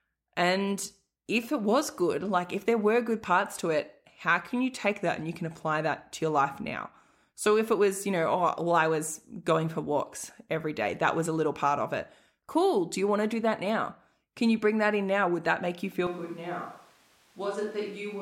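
At 16.07 s the speech turns abruptly roomy and hollow and stays that way to the end. The change is most likely a switch to a distant microphone, with a farther pickup replacing the close one. Level falls by about 5 dB, bass thins, and room noise sits around 30 dB below the speech. On a waveform the envelope steps down at once. A spectrogram shows weaker low-frequency energy and a raised noise floor filling the gaps between phrases.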